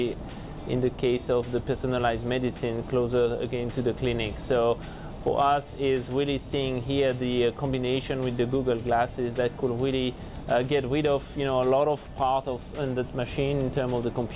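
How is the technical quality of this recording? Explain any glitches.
No glitches are audible anywhere in this recording.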